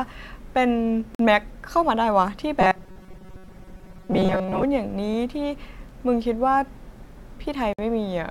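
At 1.15 to 1.19 s the speech drops out for 46 ms. This is a gap at a join of encoded pieces. Two separately encoded segments were butted together untrimmed, so the encoder's start-up delay and last-frame padding remain as silence. The edges are smeared by the codec. The speech then resumes where it left off. The same fault returns at 7.73 to 7.79 s, this time lasting 54 ms.

From 2.61 to 4.64 s the speech becomes a stiff, metallic buzz near 188 Hz. It still roughly tracks the syllables. This is robotic sound from repeated short buffers. Fresh audio arrived too rarely, so playback likely kept looping the last slice, about 5.3 ms long. Most of the passage is repeated material rather than real signal. The fixed loop length imposes that steady pitch.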